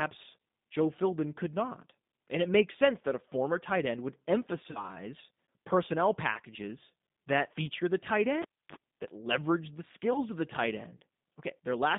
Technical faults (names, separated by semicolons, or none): G.729 codec; VoIP packet loss concealed by the speech codec; cable pulled and plugged in